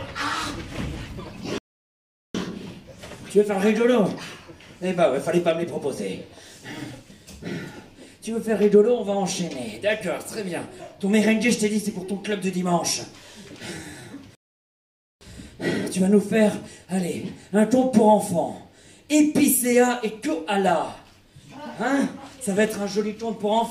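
At 1.58 s the sound drops abruptly into silence and returns at 2.35 s, picking up exactly where it left off; a second, longer break runs from 14.35 s to 15.21 s. Both are rebuffering stalls: playback used up its downloaded audio and waited for more to arrive, adding about 0.76 s and 0.86 s with nothing skipped. The waveform shows flat gaps, and the spectrogram shows blank vertical bands.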